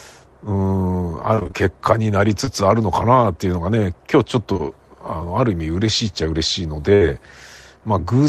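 Speech that turns choppy and robotic from 1.35 to 1.55 s: repeated packet loss (robotic sound), with five short gaps, the longest 23 ms, each patched by extending the preceding audio, so roughly half that stretch is synthetic fill. Brief smears or wobbles at 2.45–2.49 s and again at 4.53–4.61 s, where two adjacent dropouts run together, are short concealed packet loss: about 20 ms of audio never arrived each time and the receiver bridged the hole from the surrounding sound. At 6.95–7.03 s the last sound is held and fades before the speech resumes further on. That is a burst of packet loss, with about 60 ms missing and covered by a decaying continuation.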